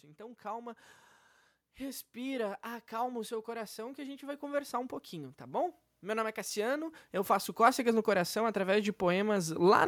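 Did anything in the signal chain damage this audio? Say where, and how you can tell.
Yes. Automatic gain rising in the call-processing stage. From 1.78 s to 9.83 s the level climbs steadily by about 18 dB, and the room noise between phrases rises in step with the speech. The processor judged the input too quiet and kept raising its gain. That shared swell is what sets it apart from a talker leaning closer or speaking up: in those cases the voice grows while the background stays where it was.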